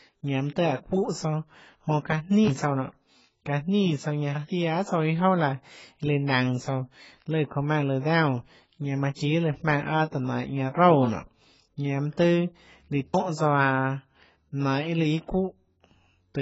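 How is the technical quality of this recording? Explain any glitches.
Quality's fairly poor. Heavy AAC compression runs through the whole clip. Nothing comes through above about 7.7 kHz, so the speech sounds dull and smeared, with a warbling or fizzy edge. That's likely AAC-LC at a low bitrate, fitting roughly 16 kbps, where the encoder drops the top end and starves the spectrum.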